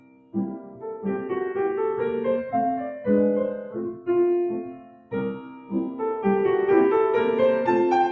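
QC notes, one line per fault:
Throughout: noise suppressor applied to music or sounds. A speech-oriented suppressor stays engaged across the whole clip and treats sustained, steady content as background noise, pulling it down while sharper onsets pass. The gain it takes away swings by roughly 10 dB, so level rises and falls with the material rather than holding steady, giving an audible pumping, thinning quality. The call-style band limit, with nothing above 8 kHz, is the normal microphone path, not part of this fault.
0.0–1.05 s, 3.62–4.08 s, 4.6–5.13 s, 5.34–5.74 s: sound cut by the noise suppressor. In each window the suppressor judges held or decaying sound to be noise and attenuates it harder than the surrounding audio. The deepest drops are about 17 dB in the first and third windows, and about 12 dB and 11 dB in the second and fourth. Over a little under a second at the start and half a second or less in each later window, sustained parts sink and tails are clipped short while transients still get through.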